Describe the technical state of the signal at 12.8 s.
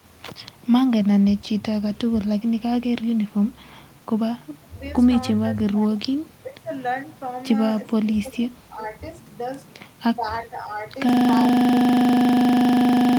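At 12.8 s the signal is caught in a system hang loop, running from 11.09 s to the end of the clip. A driver or system freeze left the hardware replaying one 40 ms buffer, which produces a steady buzz at 25 Hz. On a waveform this appears as an identical block repeating exactly. On a spectrogram it shows as frozen vertical stripes spaced 40 ms apart.

Shortly before that point, from 12.59 to 12.71 s, the looped sound drops sharply by about 25 dB for roughly a tenth of a second. This is likely speech suppressed in double talk, where an echo canceller ducked the signal. It shows as a brief trough in the waveform envelope.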